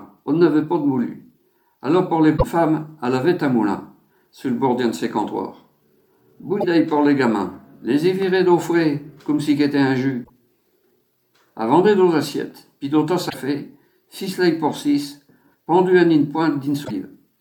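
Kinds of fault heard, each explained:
Broken MP3 bit reservoir: frames were likely lost from the stream, so the following frames reach back into the reservoir and decode another frame's bytes. The sound jumps ahead five times, each jump leaving a garbled stretch of about 45 to 70 ms, two or three 26.1 ms frames.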